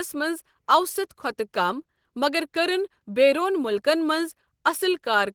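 Opus voice compression runs from start to finish, and its damage is plainly audible: the speech sounds hoarse and slightly robotic. Unlike a simple low-pass, the band stays open to 20.2 kHz, which points to hybrid mode at about 16 kbps.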